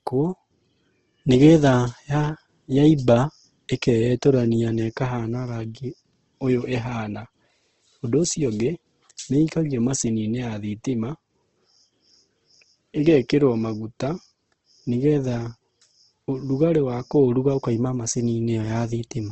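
Opus compression runs through the whole clip. The speech has nothing above 8.1 kHz. Tones sound rough, grainy and noisy, with little swirl. That points to the music mode starved of bits, likely at a rate near 16 kbps, filling thin bands with noise.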